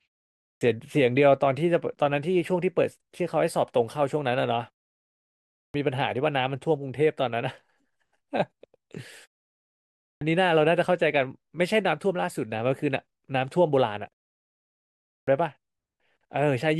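Speech here, with a clipped start after a pause at 0.48, 5.62, 10.08 and 15.16 s. Each time roughly 0.11 to 0.13 s of the onset is swallowed, so phrases jump in abruptly, as the output device sleeps through the silence and wakes too late.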